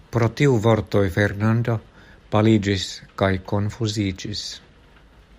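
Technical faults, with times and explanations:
2.21 to 4.78 s, channel delay (comb filtering): one channel lags the other by about one sample before the mono sum, cancelling highs near 20 kHz and slightly dulling the top end.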